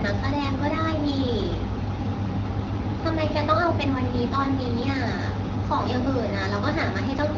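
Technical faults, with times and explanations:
The speech comes through an AMR wideband (HD Voice) path whose band-limited, model-coded character fits the 12.65 kbit/s mode, with only the light coding texture expected at that rate and no technical fault anywhere in the signal.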